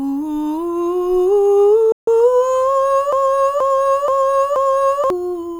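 At 1.92 s the player likely ran short of data or had its processing thread blocked, so it had nothing to send to the output. The result is a playback stall: the music cuts out mid-phrase and leaves about 150 ms of silence, lasting until 2.08 s. Playback then resumes. The gap is short but clearly audible as a hole in the flow rather than a musical rest, because the sound stops abruptly instead of decaying.

From 3.13 s to 5.10 s the stream likely stalled again, but this time the player kept resending the last fragment it held instead of falling silent. This produces a broken-record loop: a 478 ms slice of the music repeats exactly, back to back, four times, giving a stuttering, mechanical repetition with a regular period of just under half a second. The music that should have played across those two seconds is lost.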